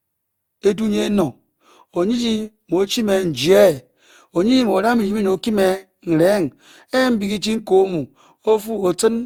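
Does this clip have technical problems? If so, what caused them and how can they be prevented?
Yes. Generation loss, likely from about four lossy encodes consistent with Opus at 64 kbit/s, stacks quantisation noise throughout, making the speech swirly, hollow and smeared, with blurred attacks. Keep a lossless master and encode to a lossy format only once, at the final step.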